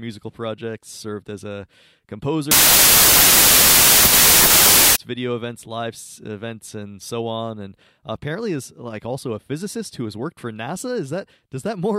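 Speech, where from 2.51 to 4.96 s, just before "video events live events", loud harsh noise buries the speech, slowed to 0.667 speed and lowered in pitch. This is a wrong sample width fault, consistent with packed 24-bit samples being read as 16-bit.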